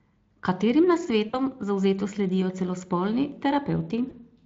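At 1.29 to 1.41 s and 4.09 to 4.14 s, VoIP packet loss concealed by the speech codec smears speech into a brief fading buzz or coloured noise, consistent with about two frames, then one, being lost.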